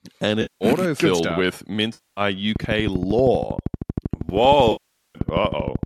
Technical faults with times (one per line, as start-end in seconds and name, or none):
0.41-0.65 AAC frame loss with concealment
1.94-2.21 AAC frame loss with concealment
2.56-5.84 train of clicks
4.71-5.18 AAC frame loss with concealment